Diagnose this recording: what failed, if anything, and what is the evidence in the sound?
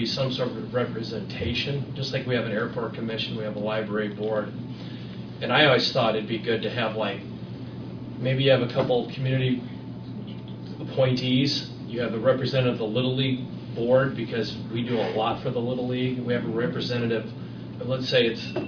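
Nothing failed here as far as I can hear; there's no audible glitch, dropout, or damage anywhere in the audio, so there's nothing to diagnose.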